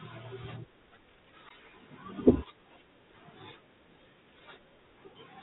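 The whole clip has passed through the Bluetooth CVSD headset codec, the narrowband link used for headset calls, which fits a 64 kbit/s stream. The encoder sends a single up-or-down bit per sample and adjusts its step as it goes, so it cannot follow fast, loud movement. The damage is plainly audible: the speech is cut off above 4 kHz, sibilants come out scratchy, louder bright sounds smear into distortion, and a grainy hiss sits underneath throughout.

From 1.49 to 1.51 s there is unconcealed Bluetooth headset packet loss. About 15 ms of audio, a couple of the small voice packets between headset and phone, never arrived, and nothing was done to fill the gap, so silence or an idle pattern plays in its place. The result is a brief hole in the speech with hard edges, heard as a quick click or dropout, after which the speech briefly returns at a lower level.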